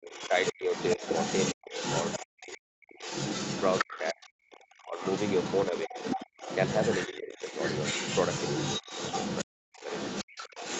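The echo canceller was likely swamped by double talk, so it ducked the talker. From 0.0 to 3.03 s the speech drops by as much as about 40 dB. The other side's voice leaks through from 0.03 s to the end, only about 5 dB below the talker. Further speech suppressed in double talk follows at 3.82–5.03 s (about 30 dB), 5.71–5.94 s and 7.07–7.59 s (about 15 dB), and 9.44–9.9 s (about 40 dB).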